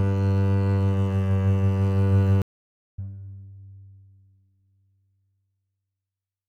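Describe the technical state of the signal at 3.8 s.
At 3.8 s the music plays through intact, with no dropout, distortion or other fault at that moment.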